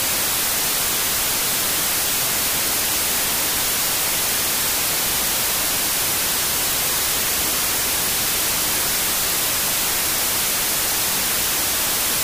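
A wrong sample width runs through the whole clip: audio stored as 32-bit integers is being read as 16-bit integers, so each original sample is split into two values. Only the upper halves carry the real signal's top bits, while the lower halves come out as loud noise. Because every sample now counts twice, the sound plays at half speed, an octave low. That speed change sets it apart from a byte-order swap, which produces similar noise at the correct speed and pitch.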